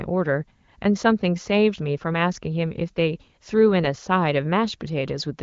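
No technical faults are audible in this speech clip.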